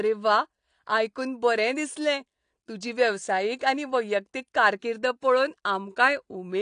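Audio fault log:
throughout, AAC compression: the speech sounds dull and smeared, with nothing above about 9.8 kHz and a warbling, fizzy texture on sibilants and held vowels that is plainly audible. This is likely low-bitrate AAC-LC coding. The encoder lowers its cut-off and quantises each frame's frequency lines coarsely, leaving gaps in the spectrum that shift from frame to frame, which fits a bitrate of around 32 kbps.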